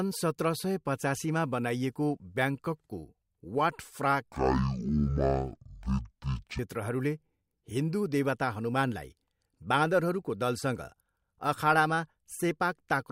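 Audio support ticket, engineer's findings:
Stereo read as mono, 4.32 s to 6.59 s. Speech drops to half speed and an octave low (-12 semitones); a fainter mirrored copy appears in the upper half of the spectrum. Probable component: channel-format handling at the decoder or file reader. Mechanism: interleaved left/right samples consumed sequentially as one channel, doubling the samples per frame of sound and halving playback rate.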